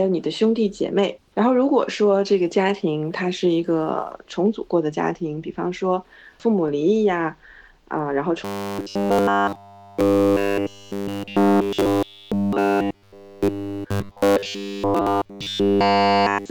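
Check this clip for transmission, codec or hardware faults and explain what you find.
There's one fault, robotic sound from repeated short buffers, running from about 8.45 s through to the end of the clip. From that point the sound turns into a rigid, metallic buzz pitched at 100 Hz that only loosely tracks what's underneath. The likely cause is new audio arriving too rarely, so the playback side keeps looping the last short chunk, which at 100 Hz fits a repeat of about 10 ms, while the real material gets skipped. Essentially the whole stretch is affected.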